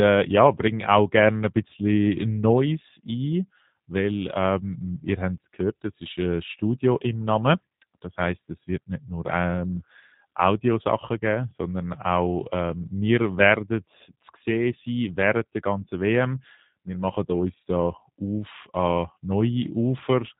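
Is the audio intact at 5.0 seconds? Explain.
No. At 5.0 seconds, as throughout the speech, the G.729 codec damage is plainly audible. The codec rebuilds each 10 ms frame from a vocal tract filter, a pitch predictor and a few pulses, at what sounds like 8 kbit/s. The result is rough and synthetic, with nothing above 3.8 kHz. A simple low-pass filter would dull the sound without this buzzy, artificial texture, which points to the codec rather than bandwidth loss alone.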